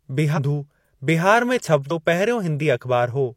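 Whole compressed frames were dropped or rejected by the decoder, so compressed frames are skipped in this speech clip at 0.33 to 0.39 s and again at 1.86 to 1.92 s, just after "बिहार में". Each time roughly 400 ms of audio vanishes, about seven frames of some 46 ms. The sound jumps forward at each join.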